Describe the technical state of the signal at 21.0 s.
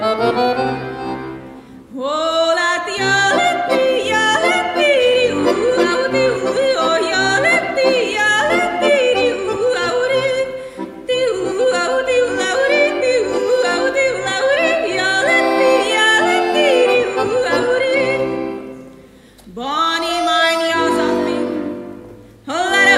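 At 21.0 s the signal is intact, with no audible fault at that moment.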